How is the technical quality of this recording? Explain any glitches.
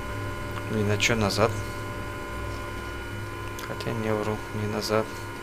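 There are no technical glitches to report in this recording. Nothing in the audio needs explaining.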